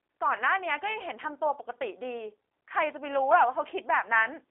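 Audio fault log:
throughout G.729 codec: speech sounds rough and synthetic, rebuilt from pulses at what fits 8 kbit/s; spectrogram shows band 300 Hz–3.6 kHz, empty above 3.8 kHz.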